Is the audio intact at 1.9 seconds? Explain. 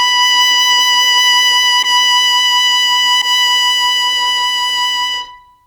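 No, not right around it: a corrupt frame decoded runs from 1.82 to 1.87 s, ending just before 1.9 s. Flipped bits in a compressed frame were played out by the decoder anyway, so misread gains and codes placed energy at wrong frequencies across a couple of frames, about 50 ms. In the music this comes through as a short, loud chirp or noisy blip, with the error peaking around -5 dBFS, before the sound resumes.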